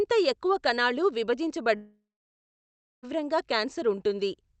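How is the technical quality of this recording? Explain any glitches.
The quality takes one big hit: a gap of more than a second in the middle. The speech came through a call-style Opus path, and you can hear the top end stop around 8 kHz.

From 1.75 to 3.05 s there's what's likely a long network dropout. The receiver stretched the last sound into a fading buzz, then sat silent for about a second, so roughly 1.3 s of speech is simply gone when the audio resumes.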